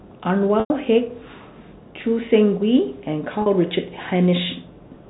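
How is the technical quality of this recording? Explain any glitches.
The speech has two brief dropouts, both from packet loss with pitch repetition, heard over the narrow telephone band of G.711 coding. From 0.60 to 0.70 s a held, buzzy tone fades into silence before the speech cross-fades back. At 3.42 to 3.46 s a shorter buzz appears. In each case the receiver bridged the missing audio, about 100 ms and 40 ms respectively, by repeating the last pitch period. That fits roughly five and two lost 20 ms packets.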